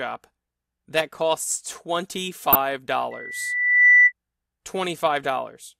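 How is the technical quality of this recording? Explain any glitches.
The recording has two clear glitches.

At 2.53 to 2.55 s there is a brief burst of DAB burbling. It lasts under 30 ms, which fits two damaged audio frames. Weak reception let a small number of bit errors slip past error correction into the MP2 data. Corrupted samples put short blips of noise into individual sub-bands. The result is a few short watery blips over the speech.

From 3.11 to 4.12 s a loudspeaker feedback squeal takes over. A microphone was picking up the speaker it fed. At 2 kHz the loop gain passed one, so that tone fed on itself. It swells over roughly three quarters of a second. It peaks at about 15 dB above the speech, as a piercing whistle that stops at 4.12 s.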